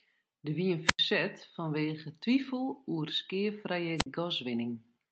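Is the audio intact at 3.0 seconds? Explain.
Yes, the speech at 3.0 seconds is intact, with no dropout, glitch or distortion at that moment, only the normal sound of the WebRTC call path, whose Opus coding limits the audio to about 8 kHz.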